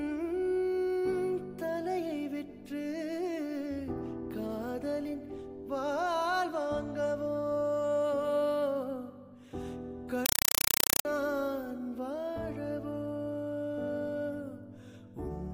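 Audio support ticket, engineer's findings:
Compressed stream played as audio, 10.26–11.05 s. Symptom: very loud chattering static replaces the programme sound for about 0.8 s. Probable component: S/PDIF or HDMI output/receiver passing an undecoded bitstream as PCM. Mechanism: each coded frame is heard as a 4 ms noise burst followed by zero padding, repeating at 31.25 Hz. The cadence points to an AC-3 (Dolby Digital) stream.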